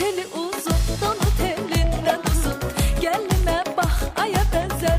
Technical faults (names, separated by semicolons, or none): train of clicks; corrupt frame decoded